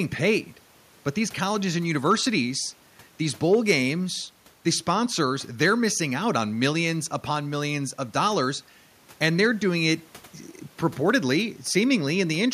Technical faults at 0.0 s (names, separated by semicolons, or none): none